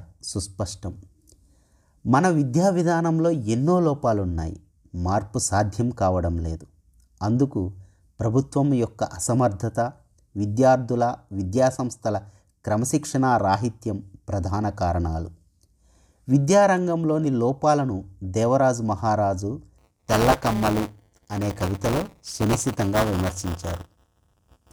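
From 19.78 s to the end, buffer tearing splices audio from one lap earlier into each 5 ms period, causing a 200 Hz rattle and hard steps on the waveform.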